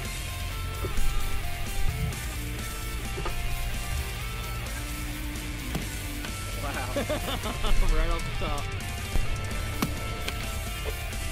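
Computer activity noise runs through the whole clip, from start to finish. Changing load on the processor, graphics card or mouse is pushing current through the ground the audio circuit shares, so the computer's own work leaks into the signal. It comes through as a buzzy, scratchy pulsing at a rate of roughly 150 per second, sitting around 20 dB below the wanted sound and shifting with the machine's activity rather than with the audio itself.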